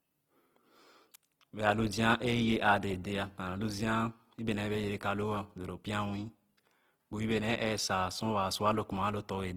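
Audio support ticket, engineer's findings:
Opus compression, throughout: speech grainy, rough, noise-textured. Likely low-bitrate CELT, roughly 16 kbps, band energies kept, gaps noise-filled. Spectrogram: fullband to about 20.2 kHz, few holes, smeared grainy highs.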